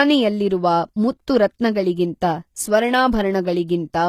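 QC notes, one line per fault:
Throughout, HE-AAC compression: the speech points to a low-bitrate HE-AAC encode, around 20 kbps, as the likely cause. The upper band is rebuilt by copying lower bands upward rather than coded, so sibilants sound gritty and lispy, with nothing above 15 kHz.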